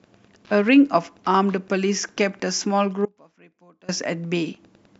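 Wi-Fi interference runs throughout: a nearby radio's beacon, every 102.4 ms, is rectified in the audio circuit, ticking faintly about 35 dB below the speech. Audio dropout to a faint residue, from 3.06 to 3.89 s: the speech cuts abruptly to a leak about 25 dB down, likely the signal lost while the path stayed live.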